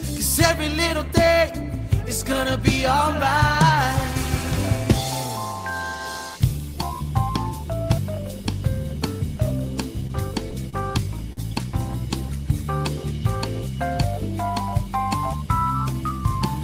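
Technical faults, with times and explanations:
10.70–10.75 s and 11.33–11.39 s: short stall from a late packet. Each time a packet arrived late and the jitter buffer ran dry. The receiver held the last sound for about 30 ms, then 44 ms, and resumed where it stopped. Nothing is lost, but the sound briefly freezes with a slight buzz or dip and then carries on slightly later.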